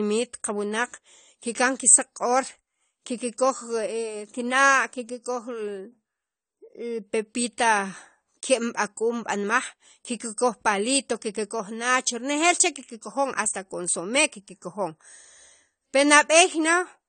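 From start to finish, the speech carries plainly audible AAC compression damage. Nothing sits above 9 kHz, so the top end is missing and the sound is dull. The likely cause is an AAC-LC encoder working at a low rate, which fits something near 32 kbps. With too few bits, the encoder drops the highest band and coarsely quantises what remains. Sibilants turn fizzy and smeared. Sustained sounds pick up a warbling texture.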